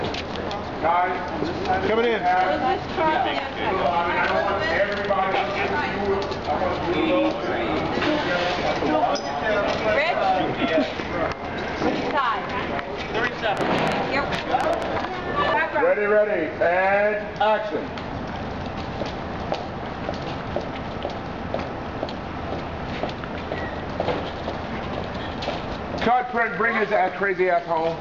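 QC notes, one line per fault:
13.57–14.83 s, train of clicks: a burst of roughly ten sharp ticks, averaging about 7.2 per second but unevenly spaced, each with much the same shape and poking out around 15 dB above the surrounding sound, so they cut right through as popping. Since the clicks are near-identical pulses laid over the audio rather than part of it, the likely culprit is interference from nearby gear or a faulty connection or power supply during that stretch.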